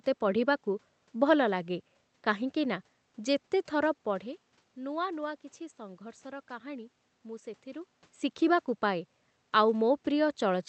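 Speech with no technical fault anywhere in it. It has passed through a call path whose codec coding leaves the top end rolled off at about 8 kHz, over a bed of room noise, and the level shifts around 4 and 7.5 s are the talker moving relative to the microphone.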